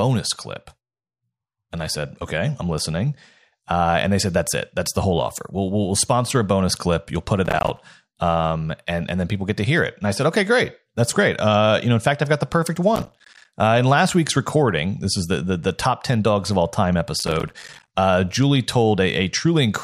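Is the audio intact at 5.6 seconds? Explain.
Yes, the speech at 5.6 seconds is intact, with no dropout, distortion, glitch or other technical fault at that moment.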